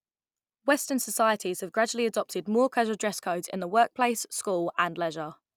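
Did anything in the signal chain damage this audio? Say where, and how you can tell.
No, nothing in the signal chain damaged this audio.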